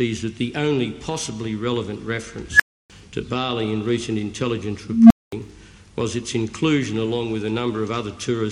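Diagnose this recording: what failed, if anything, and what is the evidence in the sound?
Unstable filter in processing: tones near 1.5 kHz at 2.52 s and 200 Hz at 4.89 s swell over 74 and 212 ms, overflow, then fall silent until the runaway recursive filter resets.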